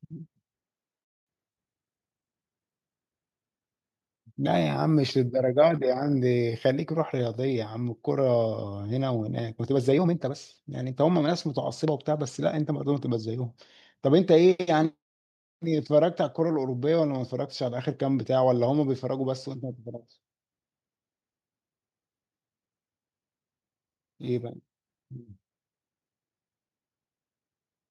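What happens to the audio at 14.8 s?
Nothing goes wrong at 14.8 s; the speech carries on intact through that moment.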